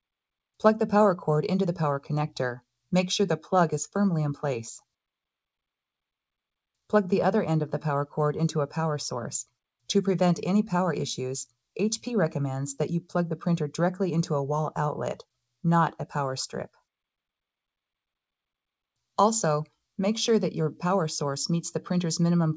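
No faults are audible; the signal is band-limited at 8 kHz, consistent with a wideband G.722 call path and normal call microphone processing.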